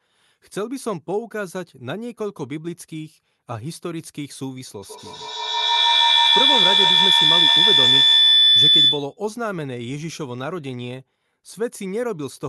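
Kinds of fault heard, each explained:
Feedback howl: from 4.82 to 9.19 s, a tone around 4 kHz rises out of the speech and swells to about 11 dB above it. A microphone is picking up a loudspeaker playing the same call, and each trip around that loop comes back louder, so the sound narrows onto the pitch the loop favours and keeps growing rather than decaying. It pulses roughly every 150 ms, the loop's round-trip delay, until the loop is broken.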